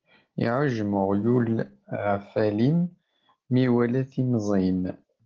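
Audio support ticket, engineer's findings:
Speech hoarse and grainy throughout, full band retained. Opus voice compression in hybrid mode: SILK low band plus CELT upper band, excitation coarsely coded, consistent with roughly 16 kbps at 20 ms frames.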